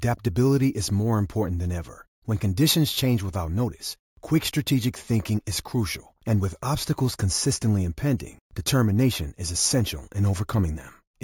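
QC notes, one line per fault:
Throughout: imaging from sample-and-hold upsampling. A bright, metallic fizz sits above the speech and rises and falls with it, about 16 dB below the signal. Its lowest copy fills the 8 to 16 kHz band, which fits 16 kHz material raised to 48 kHz by repeating each sample with no smoothing filter. The unfiltered steps leave mirrored spectra, so that image band runs opposite to the speech pitch.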